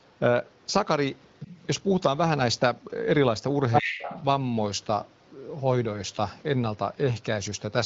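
Other side's voice leaking through, 1.33 to 1.6 s and again 3.72 to 4.24 s: a second voice surfaces behind the main speech, faint and well below it the first time, then roughly as loud as the talker the second time. The likely cause is the far end playing over the talker's loudspeaker and reaching the microphone, with the echo canceller failing to remove it, so those scraps pass into the call.

Speech suppressed in double talk, 3.81 to 4.06 s, inside the second leak: while both voices overlap, the talker's speech sinks sharply, at its deepest almost to nothing, for about a third of a second in all, then recovers. This is likely the echo canceller being unable to tell the talker from the loudspeaker echo during simultaneous talk and turning the whole microphone signal down, taking the wanted speech with it.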